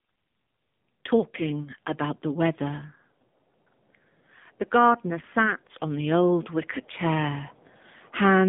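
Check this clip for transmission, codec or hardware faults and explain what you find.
One fault runs throughout the whole clip: AMR narrowband mobile codec. The codec rebuilds the speech from a sparse pulse-driven vocal-tract model, which leaves it plainly buzzy and synthetic, consistent with a 7.4 kbps mode. A spectrogram shows energy only from 150 Hz to 3.7 kHz, with nothing above 3.8 kHz.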